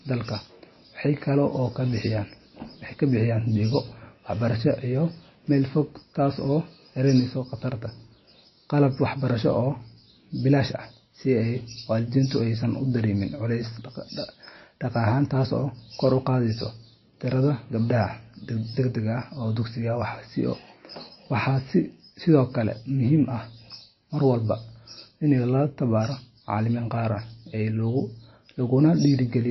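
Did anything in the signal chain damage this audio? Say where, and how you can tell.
Yes. Throughout the speech the sound is watery and swirly, with a chirpy, metallic edge on s sounds and consonant onsets that smear instead of landing crisply. Nothing is present above about 5.8 kHz, a hard ceiling rather than a gradual roll-off. This points to the codec stage, likely MP3 compression at a low bitrate around 24 kbps. Short of bits, the encoder cut the treble at a fixed frequency and dropped weak spectral lines that flicker in and out frame to frame.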